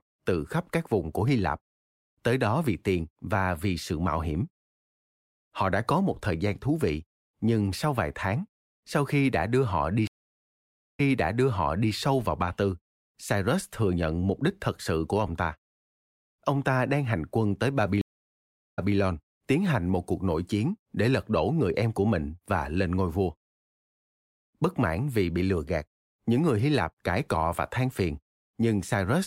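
Speech clip with two stream reconnects: the connection dropped and a fresh decoder restarted mid-stream. After "đã đưa họ đi" (10.07–11.93 s), 0.91 s of silence precedes "sâu vào", which resumes 0.94 s earlier. After "đang hành quân tới" (18.01–18.96 s), 0.76 s of silence precedes "tiến hành một cuộc", which resumes 0.18 s earlier.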